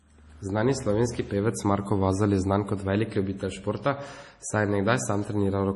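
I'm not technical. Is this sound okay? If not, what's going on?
No. The speech sounds watery and muffled throughout, with swirly, metallic s sounds and nothing above 11.5 kHz, likely from heavy MP3 compression.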